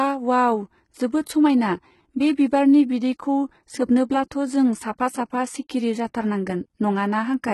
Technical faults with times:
0.00-7.53 HE-AAC compression
1.24-1.27 pre-echo

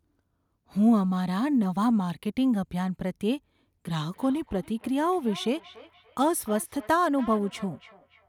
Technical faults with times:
4.13-8.28 feedback echo between two devices

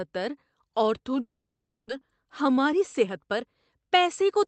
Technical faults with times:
1.21-1.91 long network dropout
2.25-4.47 jitter buffer speed-up

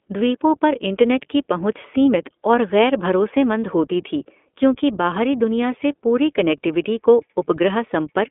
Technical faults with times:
0.00-8.31 iLBC codec

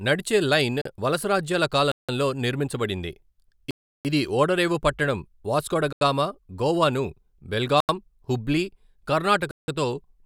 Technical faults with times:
0.82-0.85 block of digital silence
1.92-2.09 block of digital silence
3.71-4.05 block of digital silence
5.93-6.01 block of digital silence
7.80-7.89 block of digital silence
9.51-9.68 block of digital silence

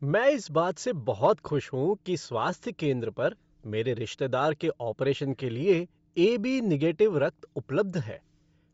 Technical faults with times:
0.00-8.74 Bluetooth LC3 compression
1.24-1.30 hard clipping

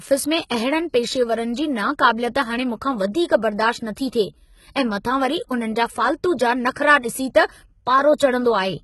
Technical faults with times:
0.00-8.83 HE-AAC compression
6.73-6.76 pre-echo

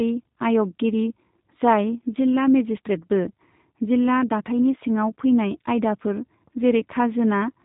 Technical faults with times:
0.00-7.64 G.729 codec

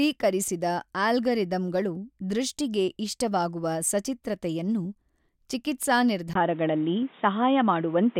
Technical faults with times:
6.33-8.19 input switched to a poorer device

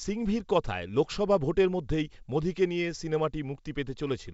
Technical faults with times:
none

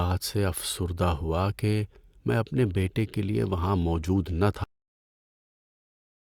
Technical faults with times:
4.64-6.28 cut-off end

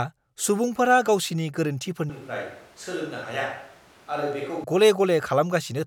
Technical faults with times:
2.10-4.64 switch to a distant microphone

